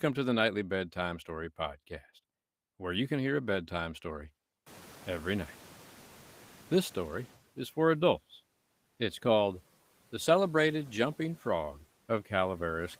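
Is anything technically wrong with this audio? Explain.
Yes. From 4.66 to 7.37 s, after "hear a bedtime story", the noise suppressor is catching up. Its noise estimate lags about 2.7 s behind a sudden rise of roughly 23 dB in room noise. The background passes through under-reduced, then sinks by about 7 dB before "is for adults".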